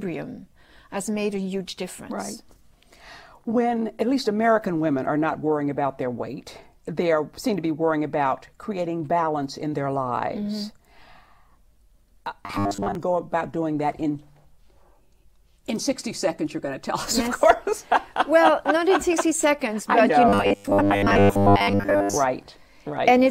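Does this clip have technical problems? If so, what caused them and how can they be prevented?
Yes. From 12.46 to 12.95 s and from 20.29 to 22.17 s the sound becomes a rigid, metallic 100 Hz buzz. This is robotic sound from repeated short buffers, likely a 10 ms block replayed while fresh audio arrived late. A larger jitter buffer prevents it.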